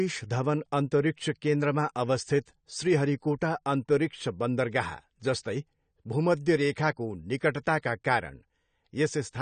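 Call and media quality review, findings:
Speech dull and smeared throughout, nothing above 9 kHz. Likely AAC compression, consistent with about 32 kbps. Audible coding damage sets it apart from a plain low-pass filter.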